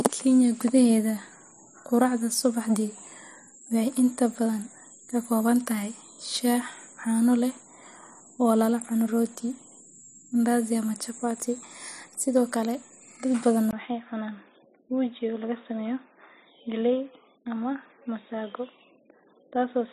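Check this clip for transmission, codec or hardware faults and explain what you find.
One fault here. Right after "kale dad badan", at 13.71 s, there's a 20 ms gap, then the speech turns dull and boxy until the end, with nothing above 3.8 kHz, about 5 dB quieter, and a new noise floor around 45 dB down. That's likely the input switched to a poorer device with a narrower band.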